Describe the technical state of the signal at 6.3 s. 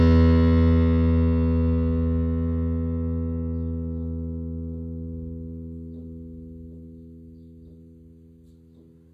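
At 6.3 s the music carries plainly audible HE-AAC compression throughout, likely from a very low bitrate near 20 kbps. Treble is rebuilt from copied lower bands, so the treble turns metallic and gritty. A spectrogram shows blocky, repeated patches above a sharp crossover.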